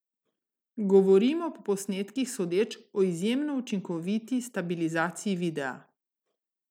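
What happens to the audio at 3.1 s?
Nothing goes wrong at 3.1 s; the speech carries on cleanly through that moment, with no dropout, click or distortion.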